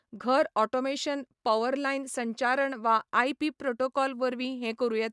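No technical faults can be heard anywhere in this speech recording.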